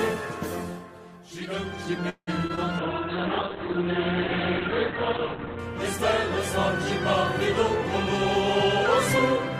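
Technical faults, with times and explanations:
2.09 to 2.29 s, call audio freeze: the sound stretches into a fading buzz for about 0.18 s, with the last 0.06 s silent, then resumes where it stopped. Likely late packets draining the jitter buffer. A spectrogram shows smeared, decaying bands, then a blank strip.
2.47 to 2.51 s and 2.55 to 2.59 s, short concealed packet loss: about 20 ms is lost each time and filled by extending the preceding sound, heard as two quick smears or wobbles.
2.80 to 5.65 s, call bitrate drop: the encoder falls from 32 to 8 kbps for about 2.8 s. Audio bandwidth narrows from 20 kHz to 4 kHz, so the sound turns muffled and rough. A spectrogram shows everything above 4 kHz abruptly cut away.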